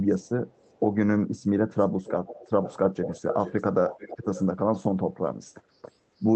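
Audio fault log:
0.08–0.29 s and 0.50–0.79 s, echo leak: a faint delayed copy of the speech trails about 0.37 s behind, roughly 30 to 35 dB below it. This is likely a far-end loudspeaker feeding back through a microphone whose echo canceller left residue.
1.79–1.87, 2.05–2.77, 3.02–3.65 and 3.88–4.45 s, echo leak: the returning copy now lags about 0.44 s and grows from about 25 dB down to only about 10 dB under the speech, then eases back to about 15 dB. The likely cause is the echo canceller leaving residue of the loudspeaker signal.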